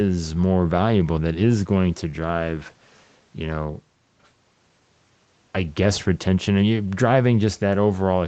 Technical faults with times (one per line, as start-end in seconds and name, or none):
none